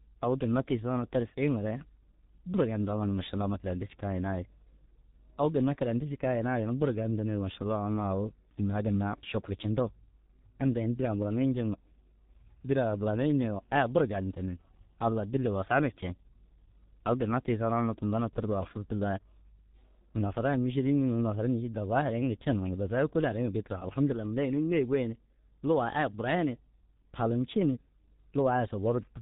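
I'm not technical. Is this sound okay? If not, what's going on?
No. The speech was squeezed through a G.723.1 codec, an old internet-phone format that packs sound into very little data and discards everything above 4 kHz. Throughout the whole clip, the voice sounds muffled and hoarse, with smeared, blurry consonants.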